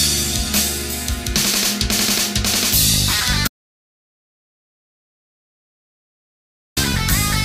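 At 3.48 s the sound stops dead and stays silent until 6.77 s, about 3.29 s lost: an audio dropout to silence, likely a lost input. Unlike a pause or noise gate, no room tone remains, and there is no fade at either edge.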